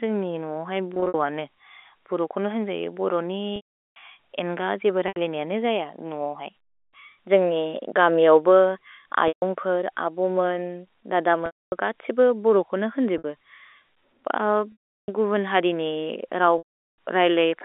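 Packet loss with pitch repetition occurs at 0.94, 3.56, 5.08, 9.28, 11.46, 13.18, 14.72 and 16.58 s. In each gap the receiver loops the last pitch period over the missing audio, which fits 20 ms packets, and fades it out over about 50 ms. The brief losses at 0.94 s (120 ms scattered across 200 ms), 5.08 s (80 ms) and 13.18 s (60 ms) come across as a short, buzzy held tone. The 140 ms gap at 9.28 s stretches that buzz a little further. The longer gaps at 3.56 s (400 ms), 11.46 s (260 ms), 14.72 s (360 ms) and 16.58 s (400 ms) fade into silence, and the speech then cross-fades back in. All of this sits within the narrow 300 Hz to 3.6 kHz telephone band of the G.711 line.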